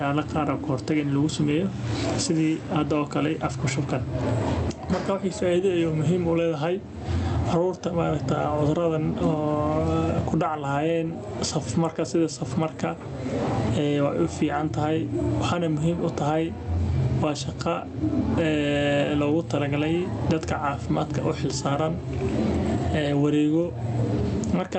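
Throughout, gain pumping: input gain was likely set far too high, so a fast limiter ducks each loud sound, with the gain swinging by about 15 dB.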